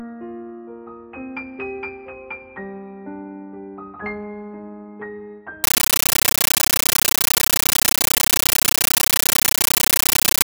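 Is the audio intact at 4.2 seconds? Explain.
Yes, at 4.2 seconds the audio plays through intact, with no dropout, click, distortion or other fault at that point.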